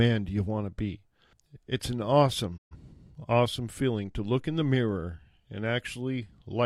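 At 2.56 s the speech fades out over about 20 ms into silence and stays muted until 2.76 s, resuming on "awesome feeling to look". This is a digital broadcast dropout: the receiver muted when frames went missing or failed checks. The 128 ms gap fits roughly three lost frames, and that audio is gone.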